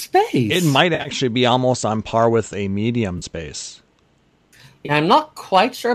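AAC frame loss with concealment hits at 0.95–1.09 s just before "be almost on par", at 3.18–3.25 s after "par with a medium", and at 4.86–4.91 s. The decoder patches missing stretches from the last good spectrum, leaving brief smeared, phasey gaps, likely from the low-delay AAC stream's short 10 ms frames dropping.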